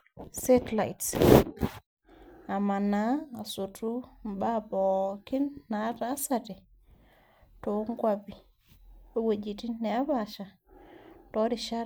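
Listening through the speech, nothing stood out as a technical problem at any point.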